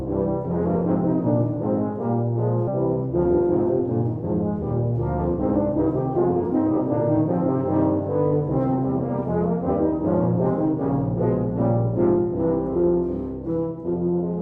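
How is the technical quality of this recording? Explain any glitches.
The recording has two timing glitches. It passes through an Opus call path, whose high end stops near 12 kHz.

At 2.67 s there is a skip ahead. A stretch of roughly 0.4 s was discarded while later audio was already queued. Playback jumps straight forward with no gap filler, so the sound on either side is joined abruptly.

From 12.16 to 13.92 s there is a jitter buffer speed-up. The buffer held too much audio, so the receiver trimmed short pitch-period pieces repeatedly, around 70 ms in total. The sound runs about 4% fast at unchanged pitch.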